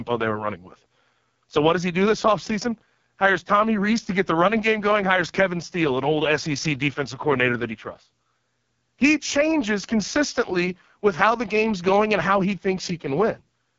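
AMR wideband (HD Voice) codec damage runs through the whole of this speech recording, and it is heavy. The sound is rough and raspy, which fits the codec's lowest 6.6 kbit/s mode. At that rate the pulse-excited vocal tract model has too few bits to follow the voice closely, so detail below 6.4 kHz turns coarse. The band above that is only shaped noise, and there is no content above about 7.3 kHz.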